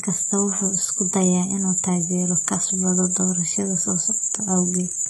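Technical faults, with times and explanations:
throughout: HE-AAC compression. The speech is heavily degraded and nothing reaches above 11.8 kHz. The treble stays bright but sounds gritty and metallic, with lispy s sounds. It is likely rebuilt from copied lower bands, which fits about 16 kbps. A plain low-pass would sound dull instead.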